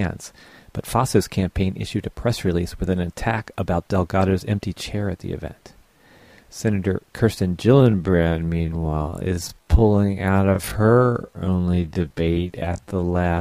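At 7.73 s the pace drops abruptly to roughly half speed, about 0.53 times, and stays there to the end at 13.40 s while pitch holds steady. This time-stretched section drags, likely from software repeating short pieces to lengthen the audio.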